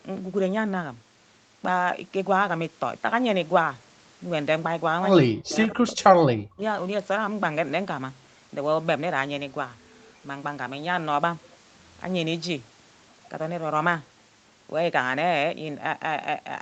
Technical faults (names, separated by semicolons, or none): speech suppressed in double talk